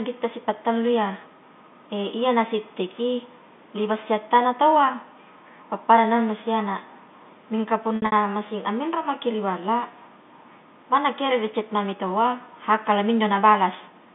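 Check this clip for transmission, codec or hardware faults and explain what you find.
One transmission fault appears: packet loss with pitch repetition, from 7.96 to 8.12 s, just before "masing amminro maki ri". About 120 ms of audio goes missing in bursts spread over 160 ms, with the longest gap 60 ms, which fits several short packets being dropped. The receiver bridges each gap by repeating the last pitch period, so the sound briefly holds on a buzzy, slightly frozen tone before the next packet arrives. A plain dropout would instead leave abrupt silences or clicks. Within the telephone band, the room noise sits about 36 dB below the speech.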